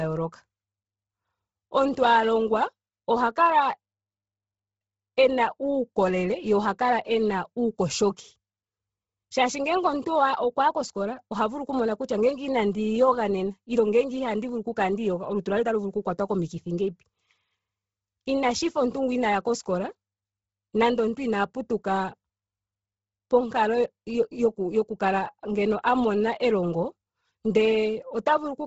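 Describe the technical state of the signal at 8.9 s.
At 8.9 s the speech carries heavy codec damage that runs through the whole clip, most likely Bluetooth LC3 compression. Nothing is present above about 7.7 kHz, and the upper band that remains sounds breathy and grainy. The transform coder has zeroed much of the high spectrum and filled it with noise, a pattern consistent with 10 ms frames at a very low bitrate, around 16 kbps.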